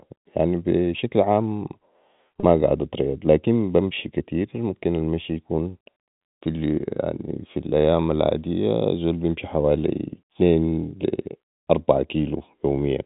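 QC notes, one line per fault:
2.40–2.43 s, packet loss with pitch repetition. About 30 ms of audio drops out, which fits a single lost packet. The receiver bridges the hole by repeating the last pitch period. That gives a brief held, buzzy tone in place of the missing sound. The gap is too short to fade into silence. The audio then resumes on "قعد اتريض لكن بمشي". The whole clip is band-limited to 4 kHz by G.711 telephone coding.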